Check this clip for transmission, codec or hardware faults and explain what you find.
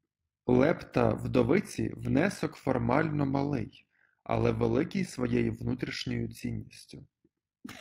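One fault is present: overlap-add ripple, running through the whole recording. The speech was split into windowed frames and rejoined with overlaps that do not sum to a steady gain. Level dips by about 11 dB once per frame, around 50 times a second. The result is a rough flutter over every syllable.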